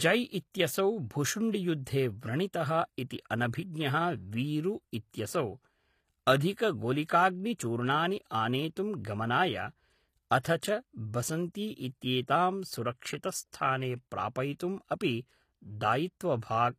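A speech clip where the treble sounds not quite real, and that's most likely HE-AAC compression at work. Nothing gets through above 14.9 kHz, and the top end has the gritty, metallic edge you hear when spectral band replication copies the lower bands upward to fake the highs. The harmonics up there don't line up with the ones below the crossover, and the damage is plainly audible throughout, which fits a low rate somewhere around 24 kbps. On top of that there's pre-echo on three attacks: a brief hiss spread over about 16 ms before the onset at 7.58 s, a longer 57 ms smear from 10.39 to 10.45 s, and a short 10 ms one at 14.59 s. In each case the codec's quantisation noise, sized for the loud attack, has leaked back into the quiet stretch just ahead of it within the same block, so the attacks come across soft instead of crisp.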